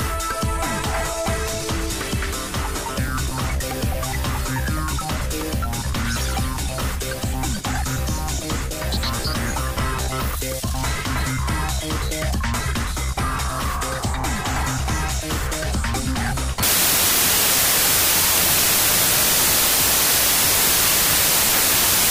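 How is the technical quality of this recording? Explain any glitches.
Quality collapses in the final section. From 16.63 s to the end there is a wrong sample width fault: packed 24-bit data read as 32-bit scrambles bytes and plays 1.33 times fast. Loud noise buries the sound, giving full-band spectrogram smear.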